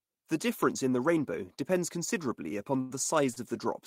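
From 2.43 to 3.38 s the speech suffers repeated stalls (stutter): packets arrived too slowly, so the jitter buffer ran dry four times. The receiver stretched the last sound to fill about 148 ms, the longest gap 93 ms. Nothing is lost, but delivery drags and stutters.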